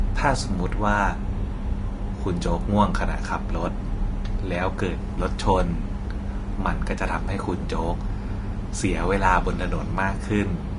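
From start to finish the speech sounds hissy and grainy, with a dull top end that stops at 10.6 kHz and blurred consonant onsets. The likely cause is Vorbis compression at low quality, consistent with roughly 33 kbps, where coarsely quantised treble turns fine detail into noise.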